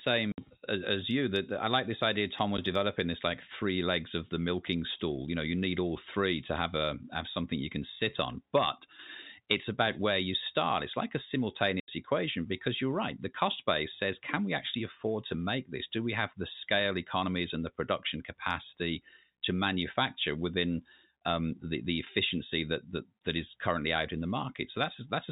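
Two dropouts here, both packet loss filled with silence: 0.32 to 0.38 s and 11.8 to 11.88 s. The receiver just played nothing for the missing chunks, so you get 60 ms and 80 ms holes with hard edges, sizes that fit 20 ms packets over the telephone-band G.711 line.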